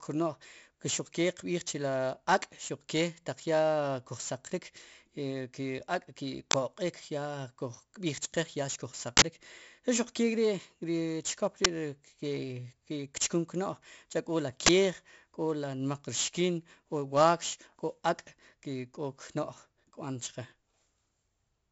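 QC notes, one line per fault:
throughout: 4-bit ADPCM compression, heavy. Each sample is a coarse 4-bit step from a prediction, so gritty hiss rides on every loud syllable and plosives smear. The spectrogram shows a level-tracking noise haze, which suggests roughly 64 kbps.
6.51–6.54, 9.17–9.22, 11.65, 14.66–14.69: uninitialised buffer. Leftover memory played as audio gives four sudden loud digital bursts of about 23, 46, 12 and 23 ms, fitting 1024-, 2048-, 512- and 1024-sample buffers. These show as abrupt blocks in the waveform and full-height spectrogram stripes.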